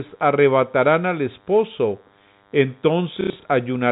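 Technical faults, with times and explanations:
Throughout: DECT cordless phone buzz, a faint, thin 100 Hz buzz with many harmonics, around 40 dB below the speech. A nearby handset's radio bursts every 10 ms are rectified into the audio path. The buzz is harsher than smooth mains hum and stays steady whatever the speech level.
3.21 to 3.45 s: packet loss with last packet repeated. About 150 ms of audio is missing, spread over 240 ms, with the longest gap near 90 ms. The receiver replays stale audio instead of inserting silence, so the sound stutters robotically. The gaps fit packets of roughly 30 ms.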